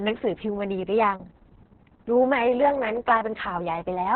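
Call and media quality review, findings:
Opus voice compression, throughout: muffled, hoarse, slightly robotic speech, nothing above 4.2 kHz. Narrowband SILK coding with coarse excitation, consistent with a bitrate near 6 kbps.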